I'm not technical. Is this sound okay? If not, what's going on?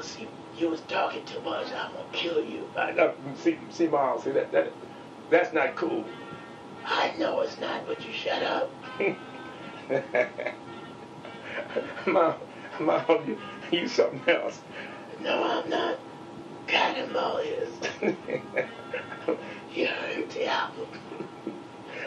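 Yes, the audio is fine, with no technical faults anywhere in it.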